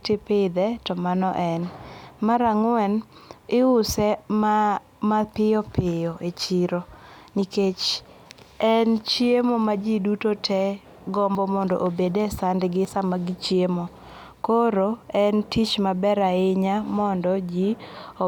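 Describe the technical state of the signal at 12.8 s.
At 12.85 s the speech jumps ahead, likely a dropped buffer (overrun) losing about 10 ms: a waveform break and a thin vertical spectrogram line.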